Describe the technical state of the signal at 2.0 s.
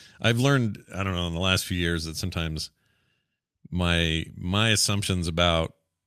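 At 2.0 s the speech signal is intact, with no audible fault at that point.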